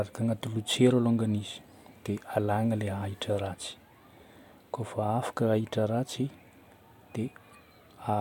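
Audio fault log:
No faults detected.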